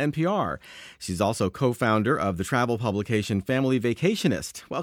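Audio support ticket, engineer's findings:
Checked full speech clip; no faults found.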